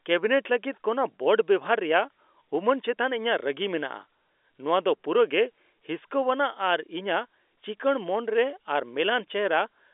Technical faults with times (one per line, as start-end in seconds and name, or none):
none